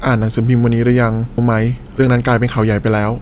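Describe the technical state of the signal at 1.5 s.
At 1.5 s a jitter buffer speed-up is under way, running from 1.50 s to 3.19 s. The buffer is draining excess delay by cutting out short pitch-period pieces again and again, removing about a third of a second overall. The speech plays back at roughly 118% of normal speed with its pitch unchanged, so it sounds hurried. On a spectrogram, syllables and harmonic tracks look horizontally compressed, and the waveform shows slightly shortened periodic stretches with no visible gaps.

Just before that, at 1.38 to 1.40 s, a skip ahead drops roughly 0.7 s of speech with no fill, and the audio on either side is spliced almost directly. The waveform shows an abrupt change in shape at the join, and the spectrogram shows a sudden mismatch in formant and harmonic patterns rather than a silent band. Across both spans the spectrogram is empty above 4 kHz, as expected from the G.711 call path.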